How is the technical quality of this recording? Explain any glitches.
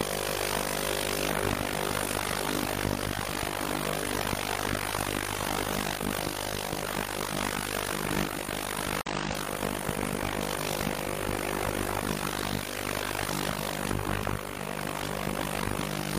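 The recording has one clear glitch. From 9.01 to 9.07 s the sound drops abruptly into silence for about 56 ms, then resumes without any shift in timing. This is a corrupt frame muted: damaged bits made the decoder reject a compressed frame, and the player substituted silence. The gap's length fits a single lost frame.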